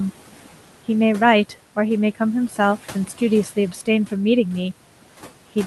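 Noise suppressor artifacts run through the whole clip. The suppressor treats the steady room noise, which sits about 19 dB under the speech, as something to remove and pulls it down by about 11 dB in the gaps. When speech comes in, the suppressor lets that noise back up underneath it, so the background pumps in and out with the talking.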